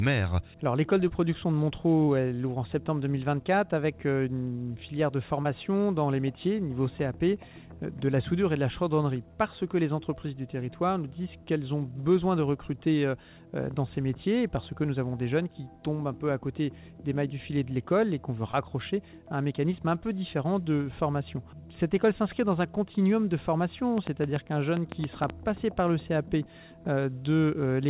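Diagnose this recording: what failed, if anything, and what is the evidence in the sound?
Network stage: short concealed packet loss at 1.08, 2.06, 5.43, 12.01 and 18.51 s, each roughly 20 ms gap bridged by extending the preceding sound into a brief smear, not a sharp tick.

Analogue wiring: a train of clicks from 23.98 to 25.31 s, about ten similar pops at an uneven pace near 6 per second, peaking about 15 dB above the signal and audible in pauses. Unlike packet-loss concealment, it adds sharp impulses over the sound rather than smearing it. The likely cause is interference from nearby equipment.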